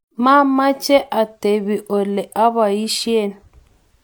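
Nothing stood out on listening to the speech here.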